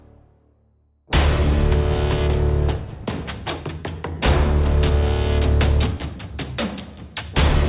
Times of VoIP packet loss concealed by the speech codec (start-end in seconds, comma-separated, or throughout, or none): none